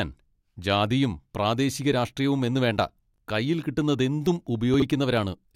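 Speech with two brief jumbled moments, at 3.14–3.18 s after "ജാതിയും പ്രാദേശിക രാഷ്ട്രീയവും എന്നുവേണ്ട" and at 4.74–4.82 s after "രാഷ്ട്രീയവും എന്നുവേണ്ട കയ്യിൽ കിട്ടുന്നതെന്തും". These are chunks out of order: a 20 ms chunk plays one and then three chunks late, leaving hard joins.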